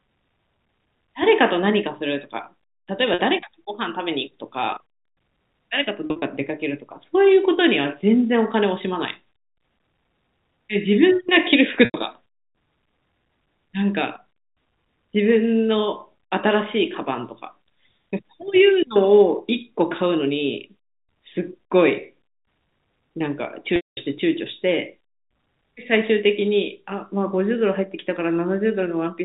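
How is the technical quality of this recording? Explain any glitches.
The recording has four dropouts, heard over telephone-band G.711 coding. Packet loss with pitch repetition occurs at 3.14–3.19 s, 6.06–6.22 s (scattered), 11.85–11.94 s and 23.76–23.97 s. Missing audio is bridged by repeating the last pitch period, giving a brief held buzz that fades toward silence in the longer gaps.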